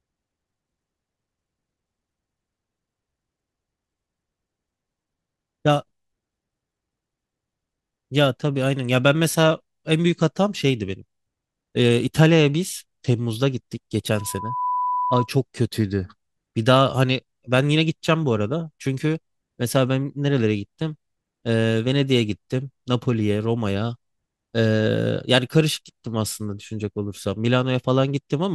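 Loudspeaker feedback squeal, 14.16 to 15.30 s: a microphone picks up the loudspeaker it drives, and at 993 Hz the loop gain exceeds one. That tone feeds on itself, swelling over about half a second into a whistle roughly as loud as the speech.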